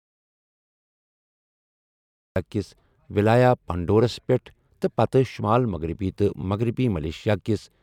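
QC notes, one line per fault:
0.00–2.36 s: audio dropout to silence, under way from the start; silence without room tone, then speech enters mid-flow, likely from a lost input.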